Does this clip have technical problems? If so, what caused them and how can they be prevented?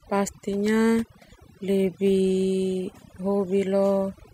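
Yes. Overdone noise removal runs through the whole speech clip: a noise reducer set too aggressively cuts individual frequency bands whenever they approach its noise estimate, taking low-level speech detail with them and leaving twinkling specks in near-silent gaps. Prevent it by using gentler reduction settings.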